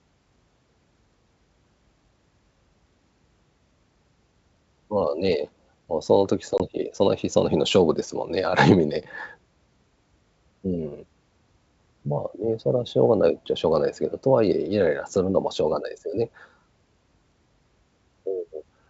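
At 6.58 to 6.61 s, packet loss on this G.722 ADPCM call drops roughly one 20 ms packet, leaving a hard-edged silent gap before the decoder's predictor resynchronises.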